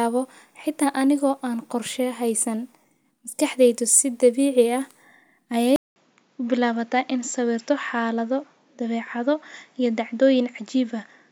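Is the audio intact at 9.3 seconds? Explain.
No. From 5.76 s onward, after a 0.2 s gap, the speech is dull above 7.6 kHz with faint new background noise, about 45 dB down. That points to a likely input switched to a poorer device rather than a simple filter.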